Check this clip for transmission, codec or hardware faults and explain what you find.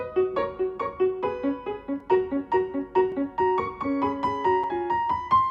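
Three short blocks of digital silence occur, at 2.00 s, 3.12 s and 4.64 s, lasting 3.3 ms, 2.4 ms and 5.0 ms. The signal drops out and returns with no fade, which points to an output buffer not filled in time. Each is heard as a tick, not a hole. Unlike a lone click, each has two hard edges with silence between.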